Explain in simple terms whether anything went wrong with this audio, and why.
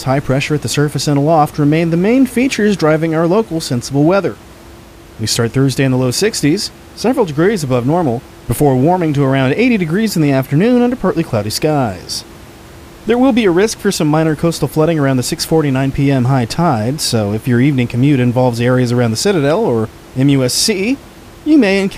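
Nothing went wrong in this speech recording; the faint background noise sitting well beneath the talking comes from the room the microphone was in, not from any problem with the equipment or the recording.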